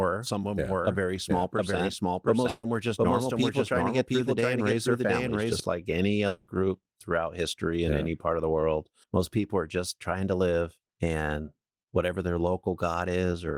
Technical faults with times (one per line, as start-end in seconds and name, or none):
0.00-5.60 doubled audio track
2.49-2.65 burst of packet loss
6.27-6.49 long network dropout